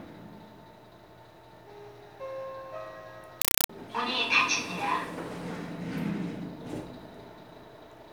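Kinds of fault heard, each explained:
Compressed stream played as audio: From 3.42 to 3.69 s, undecoded AC-3 data plays as raw samples, giving loud chattering static in 4 ms bursts, 31.25 times a second.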